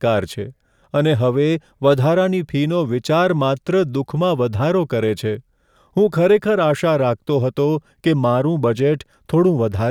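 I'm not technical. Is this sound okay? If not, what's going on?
Yes, nothing stood out as a problem when listening to this recording.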